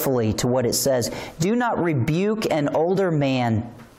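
No technical faults are audible.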